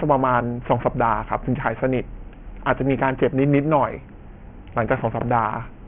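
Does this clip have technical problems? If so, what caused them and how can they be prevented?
Yes. Aliasing runs through the whole speech clip: energy above 3 kHz folds back below that edge, adding gritty, metallic sibilance roughly 20 dB under the speech, which fits resampling down to about 6 kHz without filtering. A simple low-pass would only sound dull, without this harsh folded grit. Prevent it by applying an anti-aliasing low-pass filter below 3 kHz before downsampling.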